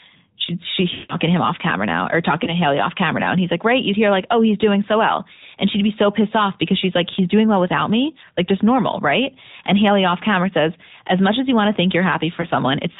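A speech recording passed through the AMR narrowband mobile codec. Nothing above 4 kHz survives, so the voice sounds thin and boxed in. The codec rebuilds speech from a vocal tract model fed with a few pulses per subframe. At this rate the result has a plainly audible buzzy, synthetic edge. The damage fits a mid-rate mode of roughly 10 kbps. There are also lost AMR speech frames in three places. From 0.94 to 1.15 s a run of about 160 ms drops out, which fits eight 20 ms frames. The decoder repeats the last good pitch and vocal tract settings with falling gain. The sound smears and fades toward silence, then returns weak or rough. Single lost frames at 2.44 to 2.50 s and 12.42 to 12.46 s each cause a brief dip or warble.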